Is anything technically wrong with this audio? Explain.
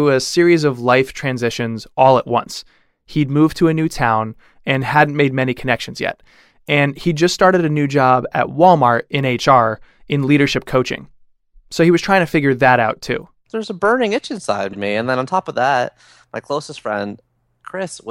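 Yes. Right after "a burning itch inside", at about 14.72 to 14.77 s, there are repeated frames: a 52 ms chunk, about a couple of codec frames, plays twice, causing a quick stutter and stretching the clip.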